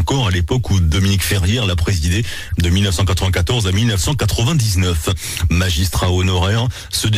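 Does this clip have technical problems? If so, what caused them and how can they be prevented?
Yes. Two short bursts cut through the audio, a quieter one from 2.49 to 2.54 s and a much louder one from 4.69 to 4.76 s. Each is a corrupt frame decoded: flipped bits in the compressed stream made the decoder misread gains and codes, scattering energy across the wrong frequencies. The lengths point to a couple of damaged frames in the first burst and a few in the second. Adding error detection and concealment would prevent it.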